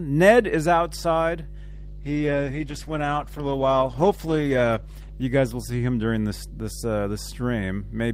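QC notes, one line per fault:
Throughout: mains hum. A steady 50 Hz tone with low harmonics sits under the speech, only about 10 dB below it, pointing to a ground loop or nearby transformer.
1.73 to 6.49 s: call bitrate drop. The speech turns rough, watery and muffled as the encoder starves, which points to a fall from about 48 to 13 kbps. It stays at its worst for about 2.9 s.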